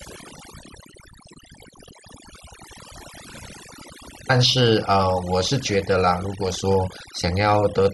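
Overdone noise removal runs throughout: the noise reduction was set too hard, so any frequency band near its noise estimate gets cut almost to nothing, taking quiet parts of the speech too. Gaps fall to near silence with twinkling specks.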